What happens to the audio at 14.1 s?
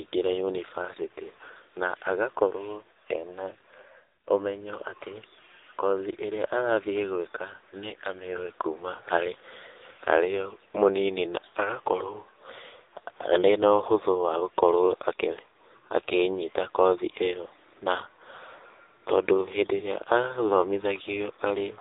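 At 14.1 s the speech carries the AMR narrowband mobile codec heard throughout: a vocal-tract model at a low bitrate near 6.7 kbps leaves buzzy, synthetic speech, with a spectrogram cut flat above 3.8 kHz.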